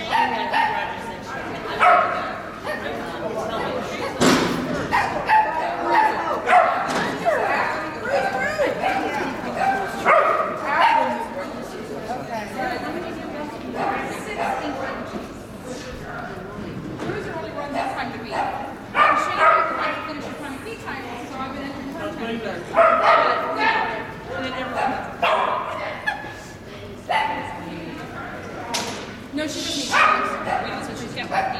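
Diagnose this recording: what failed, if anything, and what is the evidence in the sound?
Nothing in the signal chain appears to have failed: the level stays steady, and no dropouts, clicks, distortion, or timing disturbances can be heard anywhere in the recording.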